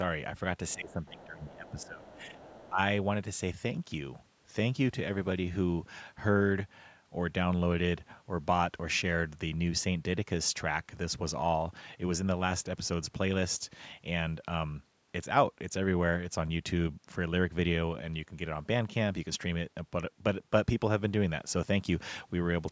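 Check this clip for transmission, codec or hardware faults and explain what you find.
Two related echo-canceller faults occur in the first three seconds of this speech clip, both tied to the far end of a call.

Other side's voice leaking through: at 0.69 to 1.25 s, 1.43 to 1.87 s and 2.09 to 2.69 s a faint second voice sits behind the talker, around 25 dB below the main speech. The likely cause is loudspeaker playback reaching the microphone and not being fully cancelled. On a spectrogram it shows as weak, separate harmonic traces under the main voice's stronger ones.

Speech suppressed in double talk: from 0.75 to 2.78 s, overlapping those leaks, the talker's own voice dips, by as much as roughly 15 dB, for about one and a half seconds in total. This is likely the canceller treating simultaneous speech as echo and attenuating everything. The waveform envelope shows sudden notches.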